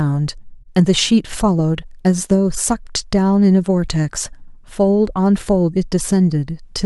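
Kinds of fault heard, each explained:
No technical faults heard.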